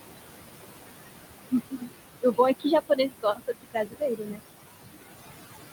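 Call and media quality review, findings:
Noise suppressor artifacts, throughout. Background pulled down about 20 dB between phrases, rising back under speech. Residual noise pumps with speech level. Probable component: noise suppressor, per-band gain changing frame by frame. Room noise sits about 7 dB below speech.

Speech cut by the noise suppressor, 1.7 to 1.88 s. Speech dips about 20 dB, around 150 ms swallowed. Suppressor misread low-level speech as noise and lowered it with the background.

Speech cut by the noise suppressor, 2.89 to 4.42 s. Deeper drop, about 22 dB. Roughly a second of speech turned faint across the span. Same mechanism. Quiet speech was classed as steady noise and attenuated.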